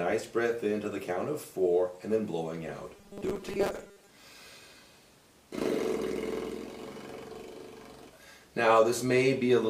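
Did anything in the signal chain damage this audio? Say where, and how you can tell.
Yes. Between 2.96 and 4.09 s the sound turns into robotic sound from repeated short buffers, a rigid metallic buzz at 200 Hz that still loosely tracks the underlying audio. The stage is most likely the driver or buffer layer: when fresh audio arrived too seldom, the last 5 ms chunk was replayed to fill the gap, and that 5 ms period forces the fixed 200 Hz pitch. Roughly half of the section consists of these repeats, with the real audio skipped in their place.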